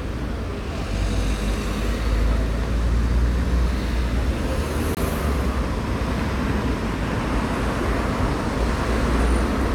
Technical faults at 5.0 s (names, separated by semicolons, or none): gap between stream segments